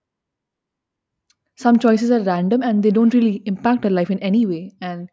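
Listening closely to the speech, nothing stood out as a technical fault at any point.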